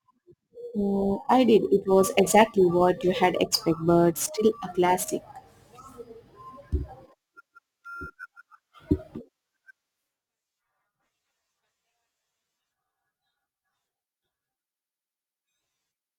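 From start to finish the speech carries a gritty, inharmonic fizz from crude rate conversion: samples were simply dropped to the nearest one, which fits a 48 kHz to 44.1 kHz change. Its error sits roughly 25 dB below the speech and tracks loud, bright sounds. Unlike codec swirl, it forms shifted, inharmonic copies of the voice.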